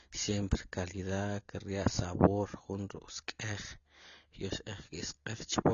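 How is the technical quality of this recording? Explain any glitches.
Quality is poor throughout, because of one fault. AAC compression damage runs the whole length. The speech sounds dull and smeared, with nothing above 7 kHz. The encoder likely ran at a low bitrate, around 24 kbps, removing highs and coarsely quantising the rest. Sibilants fizz, and sustained sounds warble.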